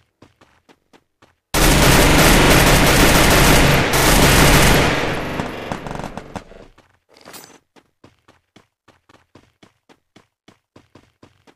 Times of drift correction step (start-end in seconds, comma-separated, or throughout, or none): none